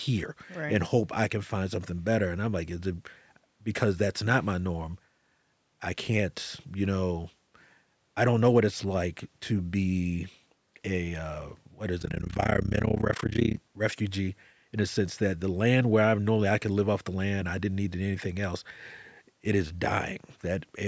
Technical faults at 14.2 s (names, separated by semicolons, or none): none